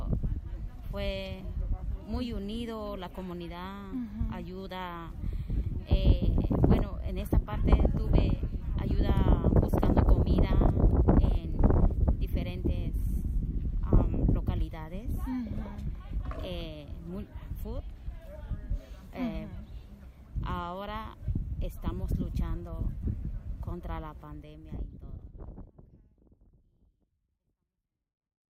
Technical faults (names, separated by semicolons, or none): none